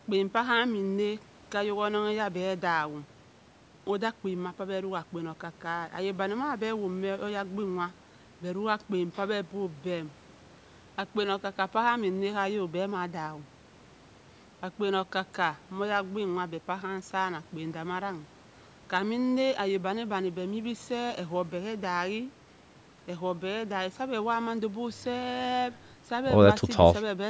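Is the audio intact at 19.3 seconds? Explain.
Yes, the speech at 19.3 seconds is intact, with nothing audible beyond the ordinary trimming of the lowest bass by the call's microphone processing.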